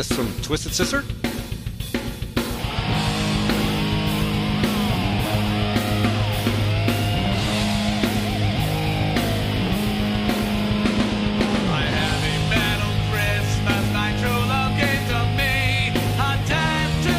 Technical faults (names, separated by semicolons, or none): none